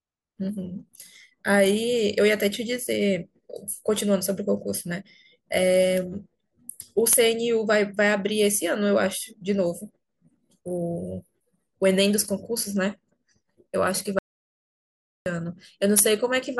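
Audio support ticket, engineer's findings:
Audio dropout to silence, 14.19 to 15.26 s: speech cuts off mid-flow, then roughly 1.07 s of silence with no room tone. Likely input loss upstream (device disconnect, link failure or mute) while the recorder kept writing silence. Content in the gap unrecoverable.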